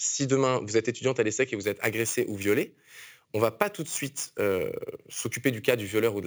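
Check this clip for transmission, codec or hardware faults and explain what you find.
One fault is present. Imaging from sample-and-hold upsampling runs from 1.64 s to the end. Each sample was repeated without smoothing, mirroring the speech spectrum into 8 to 16 kHz at about 16 dB below the signal, which fits a 16 kHz original rate. The result is a bright metallic fizz that follows the speech level, with its lowest image moving opposite to the pitch.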